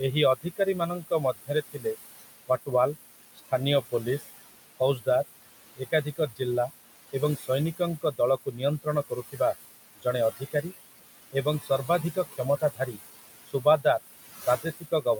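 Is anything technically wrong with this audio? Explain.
Yes, there are two related problems, both from the noise suppressor.

Noise suppressor artifacts run through the whole clip. It's pulling the room noise, which sits about 12 dB under the speech, down by about 18 dB between phrases, then letting it back up under the talking, so the residue pumps.

Speech cut by the noise suppressor happens at 0.36–2.69 s, 3.35–4.24 s, 4.79–5.07 s, 5.77–9.4 s, 9.95–10.72 s, 11.32–13.86 s and 14.46 s to the end. The suppressor mistakes quieter speech for noise and ducks it by up to about 20 dB, so soft consonants and word endings sound swallowed, in total about 2.4 s across the stretches before the last.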